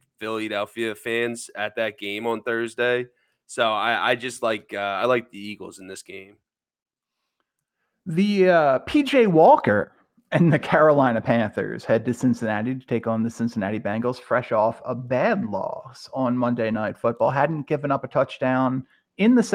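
Clock drift between sender and receiver runs through the whole clip. The sender's clock runs roughly 2 percent slow, so the receiver keeps running short of audio. Repeated timing corrections follow from 0.33 s to 19.04 s. The receiver repeats short pieces to fill the gaps, adding about 300 ms in total. The speech plays at 98 percent speed, with small, unevenly spaced edits.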